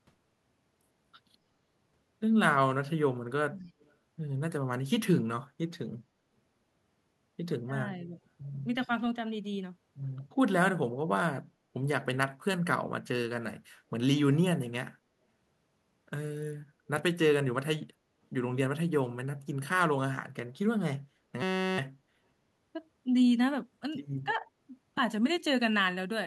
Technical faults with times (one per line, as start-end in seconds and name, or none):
3.59-3.94 echo leak
7.66-8.17 speech suppressed in double talk
21.42-21.78 system hang loop
24.24-24.45 speech suppressed in double talk